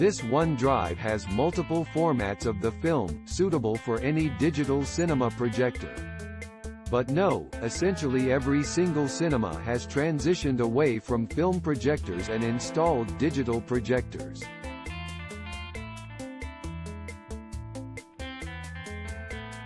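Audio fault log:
No fault was found.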